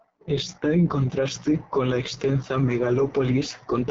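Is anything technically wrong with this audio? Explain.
Yes. Throughout, the speech has been squeezed through an AMR wideband (HD Voice) codec at a very low rate, which fits its lowest 6.6 kbit/s mode. With so few bits, the pulse-driven vocal tract model sounds heavily rough and raspy, and there is nothing above 7.8 kHz.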